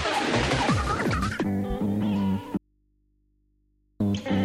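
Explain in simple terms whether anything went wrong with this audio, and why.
There is an audio dropout to a faint residue from 2.57 to 4.00 seconds. For about 1.4 seconds the sound suddenly cuts out, and all that remains is a low, steady hum, far quieter than the sound before it. The sound then snaps back just as abruptly. The likely cause is a brief break in the connection carrying the signal, while the recording equipment kept running and picked up hum from its open input.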